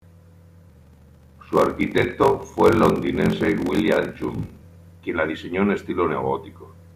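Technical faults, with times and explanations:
0.68–4.63 s, block size mismatch (padded): a regular 46.9 Hz buzz, which fits 1024-sample read blocks each partly zero-filled, runs up to "quien la diseñó en". Speech slows to 0.861 speed at normal pitch, unlike resampling faults, which shift pitch too.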